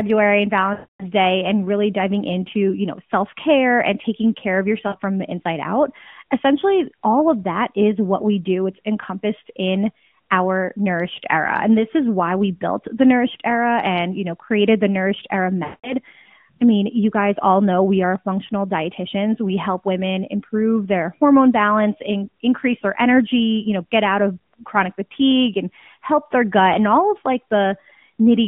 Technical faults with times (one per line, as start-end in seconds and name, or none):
0.74-1.06 lost AMR speech frames
4.88-4.96 lost AMR speech frames
15.64-15.95 lost AMR speech frames